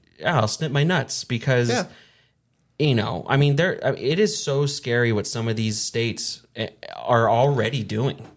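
No technical faults can be heard anywhere in the speech recording. Nothing in it calls for a timestamp or a closer look at the signal chain.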